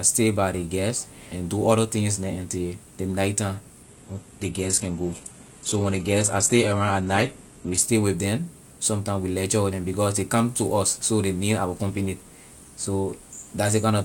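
From 3.83 to 7.83 s, an adaptive stream at a lower bitrate abruptly dulls the treble; the spectrogram empties above 12.3 kHz, with no waveform gap.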